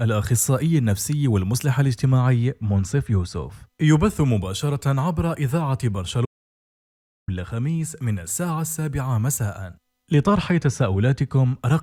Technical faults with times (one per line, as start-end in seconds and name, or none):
6.25-7.28 audio dropout to silence